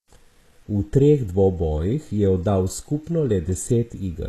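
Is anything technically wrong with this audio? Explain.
Yes. Throughout the speech, plainly audible damage points to HE-AAC compression, likely at a low rate near 16 kbps. Treble is copied up from lower bands, so s sounds turn gritty. Nothing sits above 12.4 kHz.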